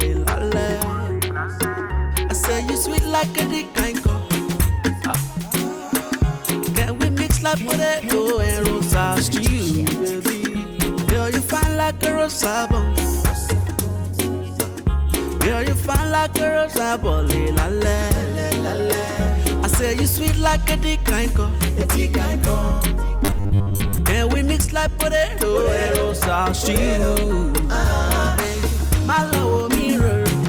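From 23.25 to 23.98 s the audio takes on robotic sound from repeated short buffers: a rigid, metallic buzz fixed at 100 Hz, which points to a 10 ms slice looping over most of that stretch, likely from audio arriving too seldom. Unlike a sweeping flanger, its pitch never moves.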